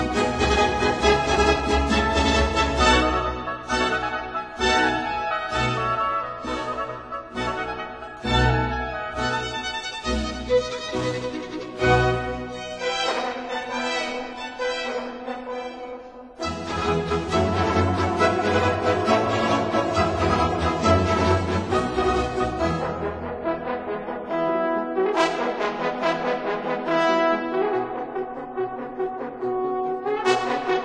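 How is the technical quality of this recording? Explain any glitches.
No glitches can be heard anywhere in the recording. There is nothing to explain, as the audio runs without any interruption or disturbance.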